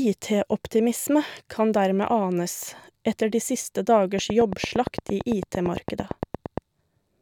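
From 4.19 s to 6.59 s, right after "anes etter de siste", a train of clicks ticks over the speech at a regular 8.8 per second, about twenty in all, peaking roughly 15 dB above the signal. It is likely interference or a faulty connection. Each click shows as a thin vertical spike in the waveform and a full-band vertical stripe on the spectrogram.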